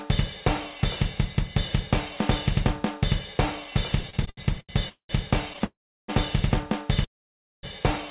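From 4.0 to 4.71 s the sound stutters: ten short repeated stalls where the receiver stretched the last bit of audio, the longest about 84 ms, adding roughly a quarter second in total. That's packets arriving late and the jitter buffer running dry over and over, so nothing's lost but it drags.

Then come three call audio freezes: 4.89 to 5.11 s, 5.64 to 6.10 s, and 7.04 to 7.65 s. Each is a fading hold that goes silent (about 0.1, 0.34 and 0.55 s of silence), then the audio picks up where it left off, likely because packets were held up in transit. Throughout, nothing reaches above 4 kHz, which fits G.711 A-law on the call path.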